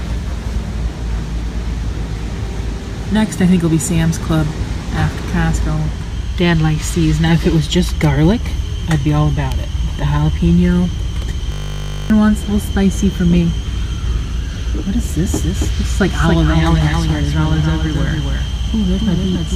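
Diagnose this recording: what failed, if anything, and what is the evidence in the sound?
System hang loop at the driver or buffer stage, 11.52–12.1 s: a 20 ms fragment repeats 29 times, giving a 50 Hz buzz. About half a second of audio is lost. The waveform shows identical repeating cycles, and the spectrogram shows harmonic lines spaced 50 Hz apart.

Doubled audio track from 15.26 s to the end, likely from a second, slower capture path: a full-band copy about 5 dB quieter follows roughly 0.3 s behind. It starts abruptly, with no decay, and appears as duplicated transients.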